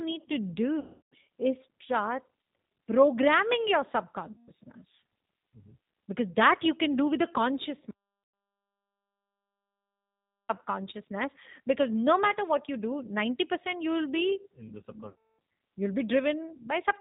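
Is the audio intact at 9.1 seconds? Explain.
No. At 9.1 seconds the sound is simply gone. An audio dropout to silence runs from 7.91 to 10.49 s, a gap of about 2.58 s of silence with no room tone or hiss underneath, and the speech cuts off mid-flow and resumes abruptly. The input feed was likely lost for that stretch, through a disconnected device, failed link or stray mute, while the recording carried on writing silence, so whatever was said then is unrecoverable.

The speech on either side of that gap also has plainly audible G.729 codec damage, which applies to the whole clip. It sounds narrow, slightly rough and synthetic, with nothing above 4 kHz, which fits the 8 kbit/s G.729A telephony codec. That codec does not store the waveform. It rebuilds the speech in 10 ms frames from a vocal tract filter, a pitch predictor and a few pulses, so fine detail is lost and replaced by a coarse approximation.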